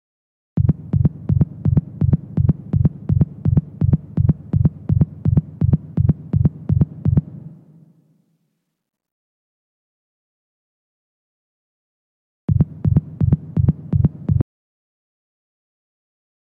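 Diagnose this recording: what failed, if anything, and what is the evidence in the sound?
An audio dropout to silence starts at 14.41 s and runs to the end: the sound cuts off mid-flow, leaving digital silence with no room tone. The waveform flattens and the spectrogram goes blank. The likely cause is a lost input, through a disconnected device, failed link or mute.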